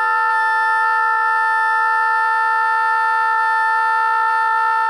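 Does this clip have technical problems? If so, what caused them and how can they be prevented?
No, this clip has no technical problems, so there is nothing to trace to a cause or to prevent.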